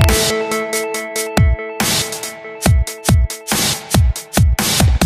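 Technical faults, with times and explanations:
0.01–0.09 s, 1.37, 1.80, 2.66, 3.09, 3.52, 3.95 and 4.38–5.02 s: integer overflow. Peaks going about 0–1 dB past full scale wrap to the opposite sign, producing violent cracks. The waveform shows full-range jumps from one extreme to the opposite. The spectrogram shows bright broadband vertical streaks.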